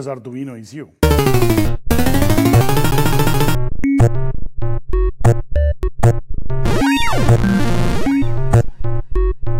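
At 1.65 s a brief blip from damaged data in the compressed stream cuts in. The decoder misreads corrupt bytes, loses sync and searches for the next frame header. From 2.91 to 3.55 s the CD is stuck on one turn. A scratch throws the laser back, repeating a 0.21 s slice three times. At 5.83 s the same damaged-data blip recurs.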